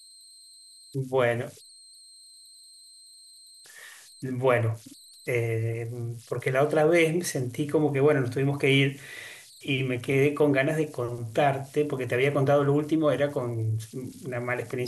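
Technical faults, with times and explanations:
Throughout, converter idle tones. A whistle of around 4 kHz sits in the pauses, about 27 dB below the speech. Grainy noise lies under quiet passages. The undithered converter falls into repeating bit patterns with small inputs, and these form tones.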